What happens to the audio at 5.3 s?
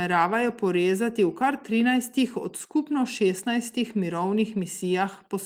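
Nothing goes wrong at 5.3 s; the speech carries on intact through that moment, with no dropout, click or distortion.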